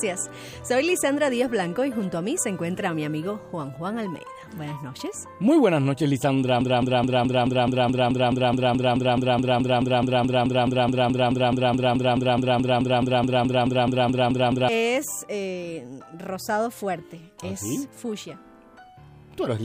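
From 6.61 s to 14.69 s a broken-record loop takes over: a 0.21 s fragment repeats exactly, back to back, 38 times, most likely because playback stalled and resent its last buffer. The real audio for that stretch is lost. Spectrogram and waveform show an identical block tiling every 0.21 s.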